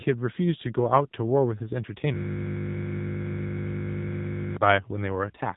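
From the start, the speech carries AMR narrowband mobile codec damage: nothing passes above about 3.8 kHz, and the low-rate vocal-tract model leaves a plainly buzzy, synthetic edge that fits a bitrate near 7.4 kbps, with few excitation pulses per subframe to rebuild the voice.

At 2.14 s a system hang loop takes over until 4.57 s. The playback hardware kept cycling one 20 ms buffer while the system froze, so the same slice repeats over a hundred times, heard as a steady 50 Hz buzz.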